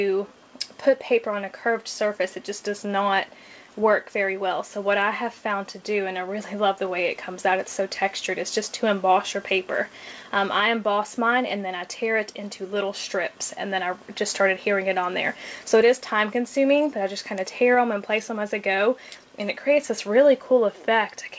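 The sender's audio clock runs slow against the receiver's, by roughly 2 percent, so the jitter buffer keeps draining for the whole clip. The receiver cannot play out faster than the sender supplies, and the sound falls steadily behind its proper pace.

From 0.27 s to 20.67 s the receiver makes repeated timing corrections, stretching the audio to about 98 percent speed by repeating short pieces, adding roughly 400 ms in total. These land at uneven intervals as faint hiccups and a slightly dragging, unsteady tempo, heard through a band that stops at 8 kHz, which fits a G.722 call path.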